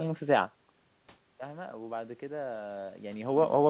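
From 1.46 to 3.48 s the automatic gain rises: after the input level falls by about 12 dB, the gain control slowly lifts by about 5 dB. Unlike a talker moving closer, the room noise swells together with the voice over those two seconds.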